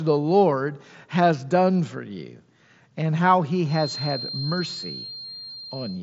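From 3.63 s to the end of the clip, a loudspeaker-to-microphone loop is likely sitting just short of runaway, which is the typical signature of a feedback whistle. A single tone at 4.2 kHz keeps ringing, about 15 dB below the speech, without building into a howl. It sounds like a thin, fixed-pitch whistle behind the speech, swelling and fading slowly, and it stays inside the mSBC headset path's band, which stops near 7.7 kHz.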